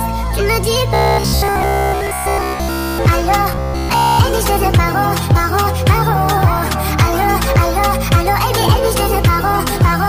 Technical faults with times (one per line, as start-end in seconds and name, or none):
0.94-3.00 robotic sound from repeated short buffers
3.52-4.19 robotic sound from repeated short buffers